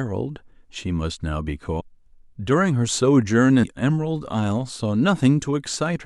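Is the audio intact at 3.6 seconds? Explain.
No. At 3.62 s there is a case of compressed frames skipped. Whole blocks of encoded audio were dropped, either missing from the stream or rejected by the decoder as corrupt, so playback jumps ahead by about 150 ms. That fits roughly seven frames of 26.1 ms each. Because adjacent frames overlap, the join is heard as a brief smeared blip rather than a sharp click, with the sound abruptly advanced.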